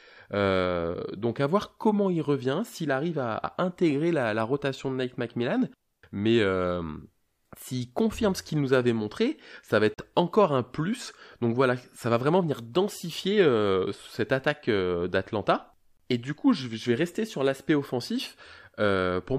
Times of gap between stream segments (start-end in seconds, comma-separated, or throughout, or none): 9.94-9.98, 15.97-16.00